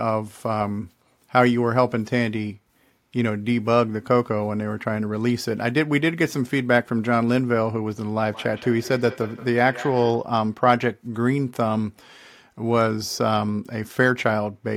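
From 8.2 to 10.3 s, there is feedback echo between two devices: a nearby device replays the call, and this microphone picks it up again beyond the reach of its own echo canceller. The speech comes back at roughly fifth-of-a-second intervals, peaking about 16 dB below the direct speech.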